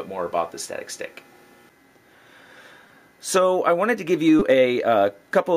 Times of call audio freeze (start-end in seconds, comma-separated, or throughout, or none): none